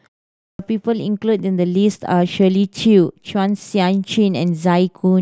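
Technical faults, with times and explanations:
0.43–0.59 s, clipped start after a pause: following 0.43 s of silence, the output path was still waking or relocking and swallowed the first 162 ms of the next utterance, so speech bursts in abruptly, missing its onset. Unlike muted pauses, which silence only background, speech itself is lost.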